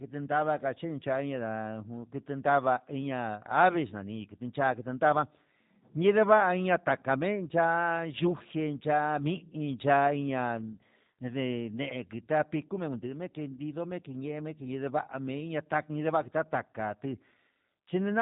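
G.729 codec damage runs throughout this speech clip: frames rebuilt from a filter, pitch predictor and sparse pulses sound rough and synthetic, consistent with an 8 kbit/s stream, with nothing above 4 kHz.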